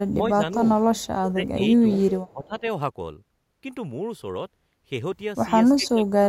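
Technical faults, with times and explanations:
0.11–0.67 s, 1.28–1.61 s, 1.80–1.87 s, 2.29–2.65 s and 5.79–6.27 s: speech suppressed in double talk. The speech sinks by about 10 to 15 dB in the first four spans and by about 35 dB at the end, almost vanishing. The likely cause is an echo canceller that confused overlapping talk from the other side with echo and turned everything down.
0.97–1.07 s, 1.62–1.66 s and 2.27–2.47 s: echo leak. Brief, faint copies of the speech come back 373 to 389 ms late, about 25 to 35 dB below the direct sound. This is likely loudspeaker pickup that the far side's echo canceller did not fully remove and sent back down the line.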